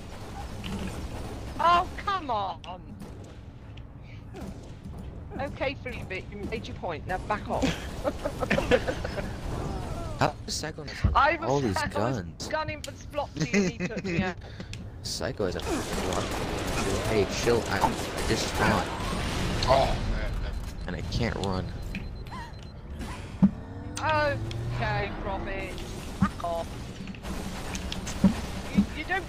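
Nothing is technically wrong with this audio.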